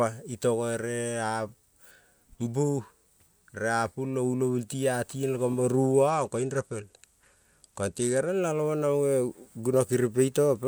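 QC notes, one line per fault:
6.08–8.29 s, Bluetooth SBC bit pool drop after "a karing koing mo": treble dulls and gritty quantisation noise rises, fitting a fall to roughly 96 kbps. Full bandwidth returns afterwards, unlike a profile switch.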